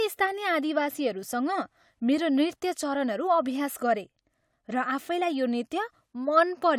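Nothing technically wrong can be heard in this speech recording, and the signal stays intact and steady for its whole duration.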